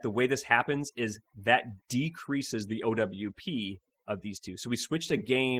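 From start to finish, overdone noise removal pushes the background to near silence with twinkling specks. The specks sit in the quiet gaps, unlike codec grain. Throughout, Opus voice compression in hybrid mode adds a plainly audible hoarse, slightly robotic texture to the speech itself, which fits a bitrate around 16 kbps. Because the band still reaches about 20.2 kHz, this is coarse coding rather than the muffling of a narrowed band.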